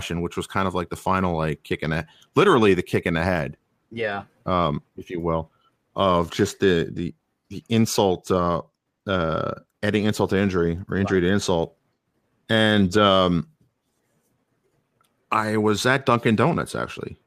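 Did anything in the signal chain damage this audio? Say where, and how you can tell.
No, nothing along the chain seems to have touched this speech recording; I can't hear any damage from any stage between the source and playback.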